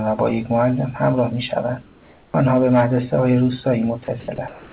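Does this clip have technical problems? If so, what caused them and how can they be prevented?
Yes. From 1.82 to 2.34 s and from 4.48 s to the end, the real background gives way to comfort noise: a steady, featureless hiss about 3 to 4 dB quieter. This is likely discontinuous transmission. Unlike a dropout, the gap is filled with noise rather than silence. Keeping the sender's transmission continuous, with no DTX, prevents it.

At 2.32 s an onset is clipped by the voice detector. About 20 ms of the sound's soft beginning is missing, so it starts abruptly out of comfort noise instead of fading in, likely because detection was slow. A longer detector lookahead prevents this.

Sound is dropped by the voice detector at 4.04–4.08, 4.20–4.28 and 4.36–4.38 s. These brief mid-sound bits turn into steady noise, likely because the detector took the sound for background. Unlike clipped onsets, they break up ongoing sound. 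Lowering the detector threshold or disabling DTX prevents them.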